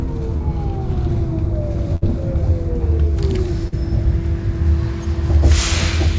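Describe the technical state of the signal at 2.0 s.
At 2.0 s the signal is inside a burst of packet loss spanning 1.96 to 2.04 s. The receiver conceals about 60 ms by extending the last sound and fading it into a decaying hiss or buzz, then resumes with roughly 60 ms absent. The surrounding G.722 call audio stays band-limited to 8 kHz.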